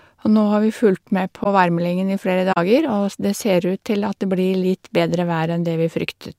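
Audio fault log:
1.44–1.47 s and 2.52–2.57 s, corrupt frame concealed: after "har vi fulgt med" the speech is hit briefly, then hit again for longer. The spans fit one and two damaged AAC frames, which the decoder detected and replaced with concealment.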